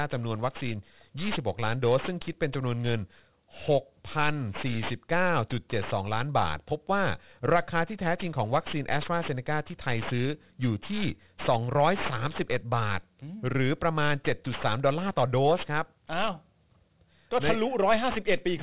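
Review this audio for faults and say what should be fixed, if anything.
Aliasing runs throughout the speech: sibilants turn gritty and metallic because content above 4 kHz folded back below it. The spectrum jams hard against 4 kHz, pointing to an unfiltered drop to 8 kHz, with folded energy roughly 15 dB under the voice. To prevent it, apply a steep low-pass filter below 4 kHz before resampling, or use a proper band-limited resampler.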